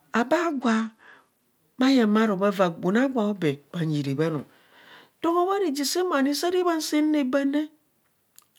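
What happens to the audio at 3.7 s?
Nothing goes wrong at 3.7 s: the speech runs on cleanly through that moment, with no dropout, click, glitch or change in level or tone to be heard.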